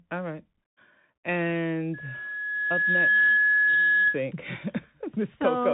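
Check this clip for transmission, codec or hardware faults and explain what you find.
Two faults are present: a Bluetooth CVSD headset codec across the whole speech clip, and a loudspeaker feedback squeal in the middle.

The CVSD codec runs from start to finish. Content stops near 3.8 kHz, which fits the narrowband 64 kbps CVSD link. Its one-bit delta steps cannot keep up with fast changes, so sibilants turn scratchy and a granular hiss sits under the speech.

The loudspeaker feedback squeal lasts from 1.94 s to 4.20 s. The microphone is re-amplifying its own loudspeaker, and at 1.7 kHz the loop gain exceeds unity. That single tone swells over roughly a second and a half and ends around 10 dB above the speech.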